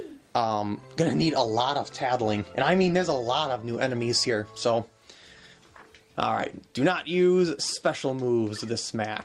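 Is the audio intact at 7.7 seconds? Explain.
Yes, the audio is intact at 7.7 seconds, with no dropout, click, distortion or other fault audible at that moment.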